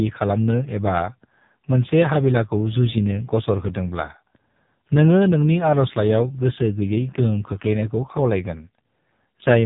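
Speech carrying heavy AMR narrowband mobile codec damage throughout: buzzy, synthetic voicing that fits a low 5.9 kbps mode, with a spectrogram cut flat above 3.8 kHz.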